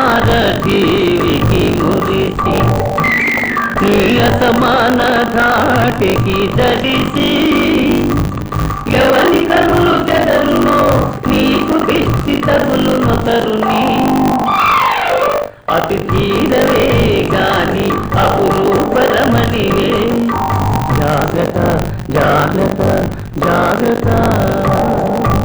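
Buffer tearing runs throughout. A rattling buzz at 50 Hz rides the sound. Nearly a third of each 20 ms period replays audio from roughly 70 ms earlier.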